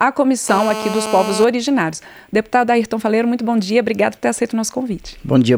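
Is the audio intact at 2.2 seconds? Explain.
Yes, the audio at 2.2 seconds is intact, with no dropout, click, distortion or other fault present there.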